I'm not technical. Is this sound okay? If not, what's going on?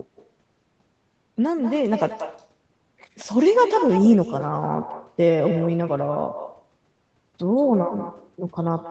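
No. This speech has an echo with no canceller: the far end's loudspeaker feeds back into their microphone, so every word returns about a fifth of a second later as a quieter, hollow copy, throughout.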